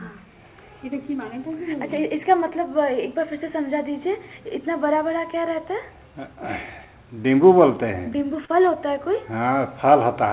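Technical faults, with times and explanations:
8.45–8.51 s, short concealed packet loss: about 30 ms of audio arrived too late, so the receiver extended the preceding sound, leaving a brief smear.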